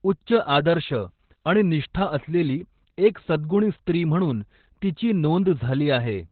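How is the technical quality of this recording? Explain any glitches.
Quality's pretty poor: the whole clip has heavy Opus voice compression damage, start to finish. There's nothing above about 4.5 kHz, so the speech sounds boxed-in and telephone-like. That points to the codec running its SILK linear-prediction mode in narrowband, which fits a very low bitrate around 8 kbps. At that rate the excitation is coded coarsely, which is why the voice comes across hoarse, muffled and a bit robotic all the way through.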